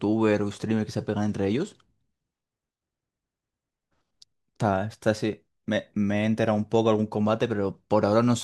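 Nothing in this bit of speech trips anything up, so there aren't any technical faults to walk through here.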